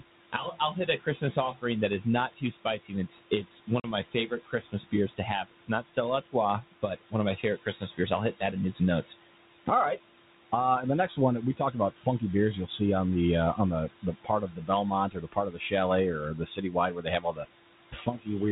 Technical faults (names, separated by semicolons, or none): noise suppressor artifacts; speech cut by the noise suppressor; packet loss on an ADPCM call